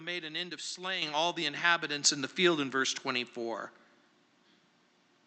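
At 1.02 s and again at 2.04 s the microphone volume is stepped up, by about 8 dB and then about 5 dB. The input gain is raised abruptly, so voice and background jump louder together. The waveform envelope shows sudden steps, and the spectrogram brightens across the whole band below the call path's 8 kHz ceiling.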